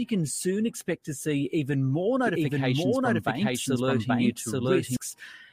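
From 2.27 s to 4.97 s, a doubled audio track appears. A second full-band copy trails the original by roughly 0.7 s, at about the same level. It has no decay or room colour. It starts and stops abruptly. A slower duplicate capture path is the likely cause.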